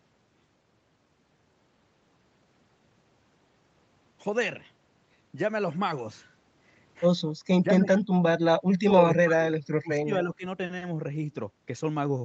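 At 7.63 to 7.94 s the speech dips by about 10 dB, then from 8.54 to 10.45 s it's chopped much harder, down about 35 dB. That's likely speech suppressed in double talk: the echo canceller mistook the talker for loudspeaker echo and turned them down.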